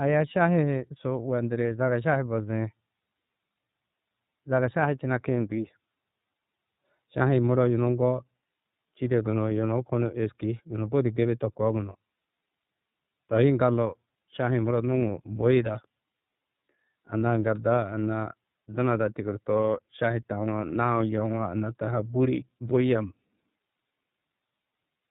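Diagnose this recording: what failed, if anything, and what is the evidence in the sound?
The failure is at the codec stage: the speech has passed through the iLBC codec for its whole length. Nothing above 4 kHz survives, so sibilants and consonant edges are dull, and the voice has a plainly audible rough, synthetic grain. iLBC codes each frame's excitation on its own, without drawing on the previous frame. The texture fits 30 ms frames at the codec's lower rate of about 13.33 kbps.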